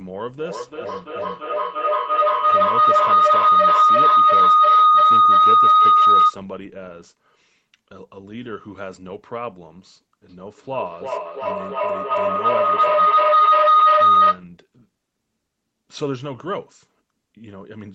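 Feedback howl swamps this speech from 0.38 to 6.47 s and 10.29 to 14.49 s. Two call devices sharing a room keep gaining level around the microphone-to-loudspeaker loop, building a tone near 1.5 kHz with a loop delay of roughly a third of a second, peaking about 15 dB above the speech.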